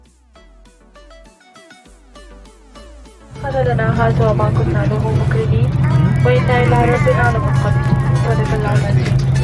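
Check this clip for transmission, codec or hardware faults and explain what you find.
From 4.92 s to the end, the resampler restarted on every block, converting 48 kHz to 24 kHz in 40 ms chunks without carrying state across edges. Each edge gets a small error, heard as a 25 Hz buzz under the signal and visible as evenly spaced vertical lines on a spectrogram.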